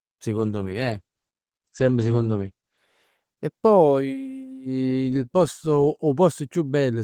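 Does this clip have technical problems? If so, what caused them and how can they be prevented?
Yes. From 0.38 to 3.85 s a call bitrate drop makes the speech coarse and watery, with everything above 8 kHz cut away for about 2.2 s, which fits the encoder falling from roughly 32 to 10 kbps. Unlike packet loss, nothing drops out, and unlike a fixed filter, full brightness returns. Reserving steady bandwidth for the call and setting a higher minimum encoder bitrate would prevent it.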